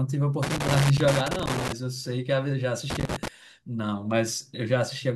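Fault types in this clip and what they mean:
Loose connector crackle, from 0.43 to 1.72 s and again from 2.90 to 3.28 s: a worn or dirty contact somewhere in the cable path is making and losing contact as it shifts, so the speech is rapidly chopped on and off while any stray DC on the line snaps in as pops. The result is an irregular, scratchy burst laid over the talking, first for about 1.3 s and then a shorter flare of roughly 0.4 s.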